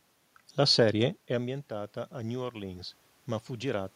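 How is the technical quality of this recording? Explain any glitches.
The recording has one glitch: an automatic gain rise from 0.97 s to the end at 3.95 s. Around the 1 s mark the talker appears to move back from the microphone, and the input level falls by about 14 dB. The automatic gain control reads this as a quiet signal and slowly turns its gain up by about 6 dB across the remaining three seconds. The speech gradually regains some loudness, and because the gain applies to everything, the room noise swells up along with it, so the background gets audibly louder toward the end.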